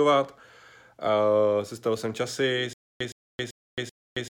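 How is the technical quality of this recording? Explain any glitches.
The recording breaks down in its final stretch: from 2.73 s to the end, the speech turns into a stutter with silent gaps. A burst of about 115 ms repeats four times, each followed by about 272 ms of dead silence, so it returns every 387 ms. This is likely a playback or stream stall, with each retry replaying the last fragment before running empty, and the speech meant for that stretch is lost.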